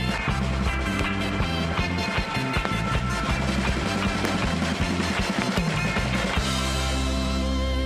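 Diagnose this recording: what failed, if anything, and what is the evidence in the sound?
Four loud pops cut sharply through the audio, each a single hard click lasting about 20 ms, at 0.99–1.02 s, 2.65–2.67 s, 4.25–4.27 s and 5.42–5.44 s. Each peaks roughly 20 dB above the surrounding level while the sound continues beneath it. The stage is most likely analogue wiring: a brief voltage spike from a loose connection, switch contact or static discharge enters the signal path, and the following circuitry turns it into a short, sharp transient.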